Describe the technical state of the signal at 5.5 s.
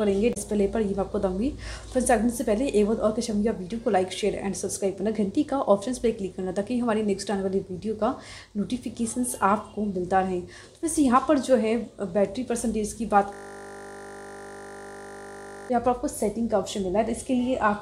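At 5.5 s the signal is intact, with no audible fault at that moment.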